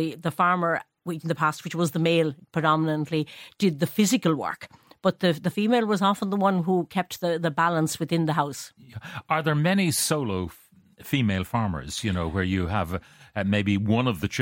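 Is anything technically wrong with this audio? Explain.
No, nothing technically wrong stood out on listening to this speech recording.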